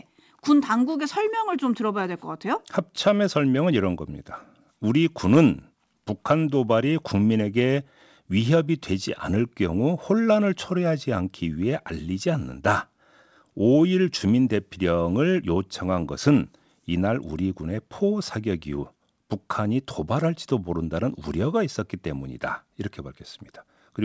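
Nothing stood out on listening to this speech as it came over the call path, where the sound stops at 8 kHz, which fits the G.722 codec.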